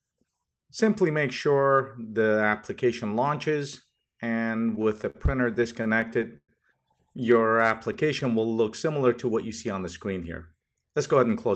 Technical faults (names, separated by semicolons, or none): repeated stalls (stutter); jitter buffer slow-down; jitter buffer speed-up